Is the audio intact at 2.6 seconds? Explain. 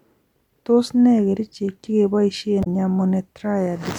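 No. From 2.60 to 2.67 s the speech is hit by damaged data in a compressed stream: corrupted bytes make the decoder misread those frames, lose sync and hunt for the next frame header, which comes out as a brief chirp or squawk that breaks the speech for about 70 ms.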